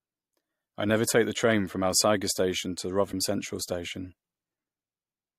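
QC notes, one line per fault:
3.11–3.13 s, broken MP3 bit reservoir: a brief glitch lasting about 24 ms interrupts the speech, and the audio resumes slightly ahead of where it left off. The length matches roughly one MP3 frame, so the likely cause is a dropped or cut frame. The frame that follows expects part of its data to sit in the preceding frame's reservoir space, finds bytes that belong elsewhere, and decodes them wrongly before the stream resynchronises.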